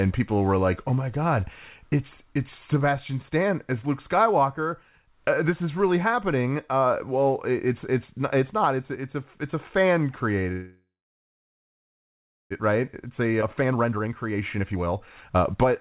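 From 10.52 to 12.52 s, just after "a it's a fan", there is a call audio freeze, likely caused by packets stalling in transit so the jitter buffer ran dry. The last sound is stretched into a brief fading buzz, then about 1.65 s of silence. When the sound resumes it continues where it stopped, so nearly 2 s of delay has been inserted without losing anything.

From 12.68 to 15.71 s, a jitter buffer speed-up follows as the receiver works off that backlog. It repeatedly cuts out short pitch-period slices, roughly 0.7 s in total. The speech plays at 121% of normal speed with unchanged pitch and sounds rushed.

Within that stretch, at 13.41 to 13.44 s, a skip ahead drops around a second of audio that was already queued. The two sides are spliced together with only an 8 ms fill, so the speech jumps abruptly forward. Throughout, the G.711 mu-law call path keeps the band below 4 kHz.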